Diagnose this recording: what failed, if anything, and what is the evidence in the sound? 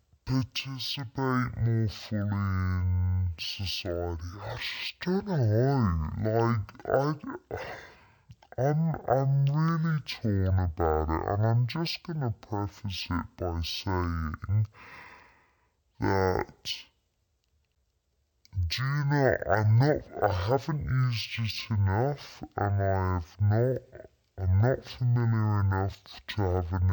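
Stereo read as mono, at the sample-format or file-reading stage, affects the whole recording. The speech plays at half speed and an octave (12 semitones) low because interleaved left and right samples are read as consecutive mono samples. A spectrogram shows a fainter mirror image in its upper half.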